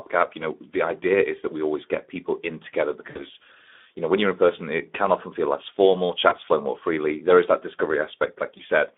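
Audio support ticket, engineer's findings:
Speex codec, throughout. Hoarse, noisy speech, band limited to roughly 250 Hz to 3.5 kHz. The CELP excitation is starved of bits, with damage plainly audible, which fits a narrowband Speex stream at around 11 kbps. Component: encoder quality setting on the call path.

VoIP packet loss concealed by the speech codec, at 3.09 to 3.26 s after "get people in together", 6.29 to 6.34 s between "often feel less formal" and "flow more freely", and 8.57 to 8.62 s. Speech smears into a fading buzzy tone or coloured noise. The decoder extrapolates pitch and filter, then recovers slowly. Gaps fit about three 20 ms frames lost at 3.09 s, one elsewhere. Component: network/jitter path.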